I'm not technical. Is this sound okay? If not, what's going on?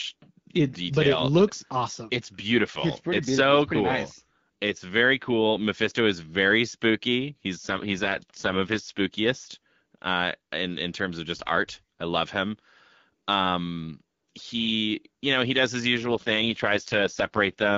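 No. Twice, the phone network switched the call's voice coding to a much lower quality setting to keep a weak connection alive, which is called an AMR rate drop. Speech from 7.63 to 8.92 s, and again from 15.97 s to the end just after "know he does his", sounds rougher and more robotic, with no gap or muffling. Between those moments the HD Voice coding sounds clear.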